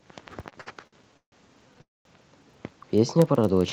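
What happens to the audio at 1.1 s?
At 1.1 s you're right in the middle of a run of repeated stalls (stutter) that lasts from about 0.49 to 1.34 s. Packets kept showing up late, so the jitter buffer ran dry nine times and the receiver stretched out the last bit of sound to cover each wait, fading it on the longer ones. The longest gap is 150 ms. About 326 ms gets filled in, roughly 39% of that stretch. Nothing is actually lost, but the speech drags and hiccups.

Underneath that, the filter restarted on every block is still going at 1.1 s, as it is across the whole clip. The filter drops its memory between blocks and starts each one from silence, so every block begins with a small click. Those clicks come 25 times a second, one block every 40 ms, and blur into a low buzz that gets louder and quieter with the speech level.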